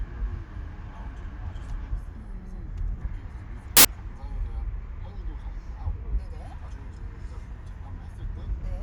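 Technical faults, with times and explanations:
3.77–3.85 s: samples built from the wrong bytes. For about 80 ms the sound gives way to a burst of loud, harsh broadband noise. The reader has assembled each sample from its bytes incorrectly, through an offset of one byte, a swapped byte order or a wrong alignment. The rapidly changing low bits then land in the high, weighty part of every value. The result is loud, harsh noise.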